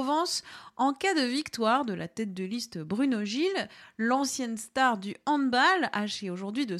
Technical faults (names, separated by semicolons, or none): none